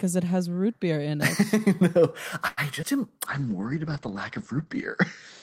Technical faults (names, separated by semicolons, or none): short stall from a late packet; skip ahead; jitter buffer slow-down; call bitrate drop